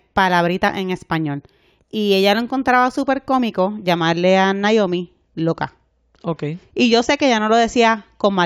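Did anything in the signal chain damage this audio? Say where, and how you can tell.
Yes. A sample-rate conversion stage damaged the speech from 0.00 to 3.94 s. This is imaging from linear upsampling: 16 kHz audio was raised to 44.1 kHz by straight-line interpolation. The top end sounds dulled. A faint mirror image, roughly 35 dB down, fills 8 to 16 kHz and adds a metallic shimmer to sibilants.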